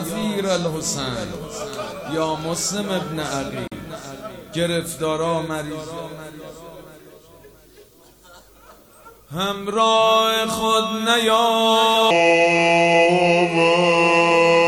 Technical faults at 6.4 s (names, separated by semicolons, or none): none